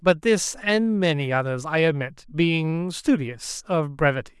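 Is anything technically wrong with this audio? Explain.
No, nothing in this speech recording stood out as a technical problem on listening.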